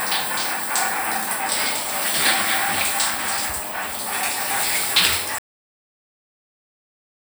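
At 5.38 s the audio stops dead in the middle of a sound and the remaining stretch, to the end at about 7 s, is digital silence. This is a cut-off end: the final buffers were never written out or played, so the sound is truncated rather than finished. What separates it from a natural ending or a fade-out is the absence of any decay or reverberant tail; the level falls from full to nothing instantly.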